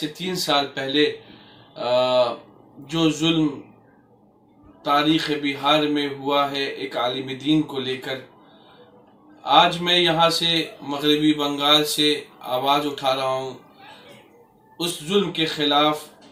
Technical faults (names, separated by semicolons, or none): pre-emphasis left on